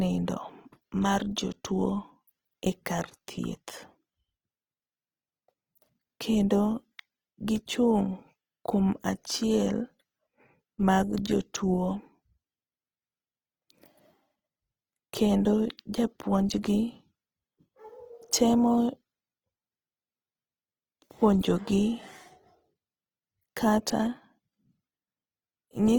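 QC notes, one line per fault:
Throughout, Opus compression: the speech sounds rough and grainy rather than swirly, with tonal parts turned noisy yet the spectrum still filled and reaching to about 20.2 kHz. This is likely Opus in its music (CELT) mode, which preserves each band's energy and, when starved of bits, fills bands with folded lower content or noise instead of leaving holes. The plainly audible grain fits a low bitrate, around 16 kbps.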